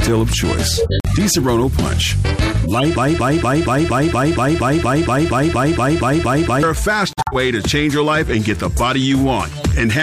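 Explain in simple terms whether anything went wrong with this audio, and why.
Corrupt frame muted, at 0.77 to 1.17 s and again at 7.13 to 7.34 s: the sound drops into sudden silence for about 0.39 s, then about 0.21 s. The audio is stored in small compressed blocks. When some of those blocks arrived damaged, the decoder rejected them, and the player filled the gap with silence. The longer hole fits about eight lost blocks and the shorter one about four. The timing stays correct, so the sound resumes exactly where it should.

Corrupt frame decoded, from 2.64 to 2.84 s: instead of silence, you hear a short, harsh burst lasting about a fifth of a second. Here the damaged blocks, a few of them in a row, were not rejected. The decoder played them anyway and read the broken data as real instructions. That put sound energy in the wrong places, so what comes out is a chirp or noisy blip that does not belong to the audio.

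Broken-record loop, from 2.96 to 6.63 s: a snippet of about 0.23 s plays over and over, back to back, 16 times, like a stuck record. The likely cause is a stall somewhere in the player, encoder or stream, which kept resending the last piece it had instead of moving on. Whatever should have played during those 3.7 seconds is gone.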